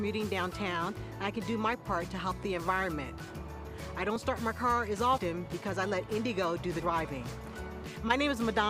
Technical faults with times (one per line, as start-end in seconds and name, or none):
2.08 dropped buffer (overrun)
4.16 dropped buffer (overrun)
6.82 dropped buffer (overrun)
7.96 dropped buffer (overrun)